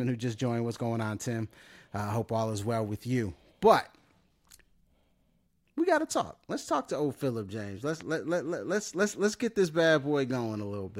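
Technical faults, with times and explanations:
8.01 to 8.03 s, loud pop: a single sharp pop jumps out a few dB above the speech just before "let let let let's", and the talking carries straight on underneath it. That's likely a quick voltage spike, from a plug, switch or static, landing on the signal.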